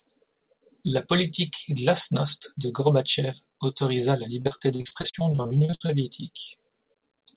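From 4.42 s to 5.91 s the speech breaks up with repeated packet loss, giving a robotic sound. About 19 short dropouts fall across that 1.5 s span, the longest 59 ms. Each hole is bridged by stretching the preceding sound, so roughly 38% of the span is concealment rather than real signal. The result is choppy, robotic speech with fragments missing, heard over a narrowband call path with nothing above 4 kHz, which fits a G.711-style codec.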